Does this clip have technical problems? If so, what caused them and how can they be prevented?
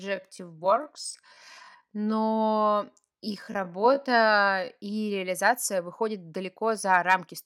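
Yes. Software likely slowed the speech to about 0.64 times speed from 0 to 5.2 s, a time-stretched section, so it drags before the pace abruptly recovers. Prevent this by matching the content to the required length instead of stretching it.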